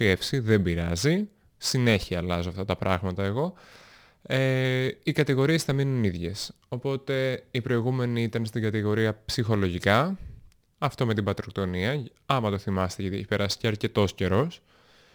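Throughout, crude rate conversion, consistent with 48 kHz to 44.1 kHz without filtering, adds gritty fizz about 30 dB down, showing as inharmonic spectrogram streaks.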